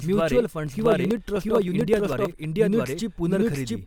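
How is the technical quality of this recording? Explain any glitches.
The technical quality is poor: the speech suffers from two separate faults.

Doubled audio track, throughout: the speech has most likely been captured a second time through a slower path, or an edit has left two copies out of step. A second full-band copy follows roughly 0.7 s behind at about the original's level, with no decay or room colour, so the speech is repeated as a distinct echo.

Periodic USB or driver dropouts, from 0.67 s to 2.44 s: a background task repeatedly blocks the USB bus or audio driver every 63.5 ms, and each time a fraction of a millisecond of audio is skipped outright. Across about thirty such gaps, this produces an evenly spaced train of ticks at roughly 16 per second.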